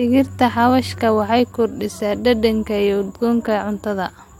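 No technical faults can be heard anywhere in this speech recording. There is no moment where the audio shows signs of something having gone wrong.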